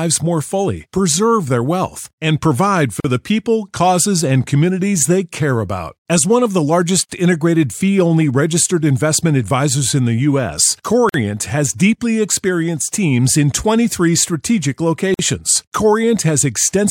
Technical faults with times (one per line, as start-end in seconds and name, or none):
3.00-3.04 gap at a join of encoded pieces
7.04-7.09 gap at a join of encoded pieces
11.09-11.14 gap at a join of encoded pieces
15.14-15.19 gap at a join of encoded pieces